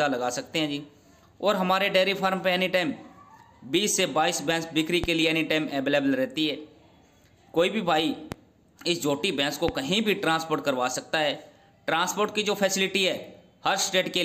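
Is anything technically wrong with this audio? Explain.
Yes, there are three loud pops, at 5.04 to 5.07 s, 8.32 to 8.36 s and 9.68 to 9.72 s. Each is a single sharp thump jumping well above the sound, which carries on underneath. They likely come from voltage spikes from a switch, static or a driver glitch.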